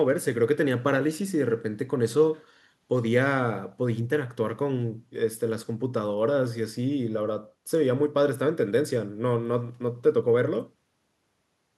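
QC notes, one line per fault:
No problems stood out on listening to this speech recording.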